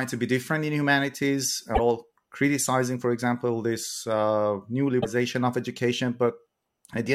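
Damaged data in the compressed stream leaves the decoder unable to read some frames, so it loses sync and the speech breaks into a brief garbled blip at 1.71–1.79 s and 4.98–5.06 s.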